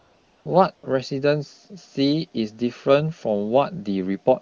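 Speech clip with AMR comfort noise from 0 to 0.45 s and from 0.75 to 0.83 s. The phone stopped sending speech frames, and synthetic noise replaced the real background. On a spectrogram these stretches show as flat, featureless hiss with abrupt edges, unlike the wideband speech around them, whose clarity fits a high AMR-WB rate.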